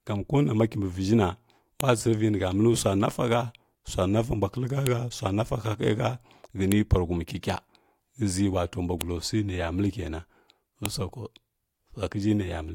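Sharp, loud clicks at 1.81, 4.87, 6.72, 9.01 and 10.86 s are a file header played as audio: joined pieces kept their WAV headers, whose bytes sound as samples. Each shows as a thin spike on the waveform and a vertical broadband line on the spectrogram.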